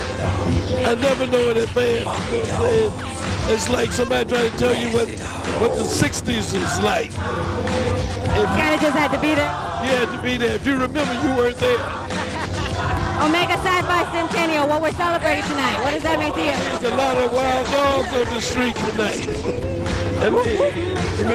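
A call bitrate drop affects this audio from 15.36 to 19.71 s. The sound turns coarse and muffled, which fits the encoder being pushed from around 40 kbps down to roughly 14 kbps. Unlike packet loss, the degradation is continuous, without gaps or glitches, and clears when the bitrate recovers.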